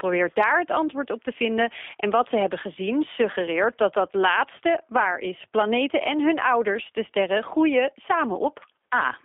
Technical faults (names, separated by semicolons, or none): G.729 codec